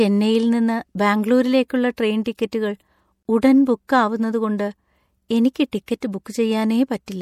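Speech here, and the whole clip has that watery, swirly edge with smeared attacks and chirpy s sounds. That's plainly audible MP3 compression, most likely from a low bitrate that fits 64 kbps. Then at 3.23 to 3.25 s there's a gap at a join of encoded pieces: a 26 ms hole in the speech, with its edges smeared by the codec. The sound then picks up right where it stopped, which points to separately encoded chunks spliced without trimming the encoder's start delay and end padding.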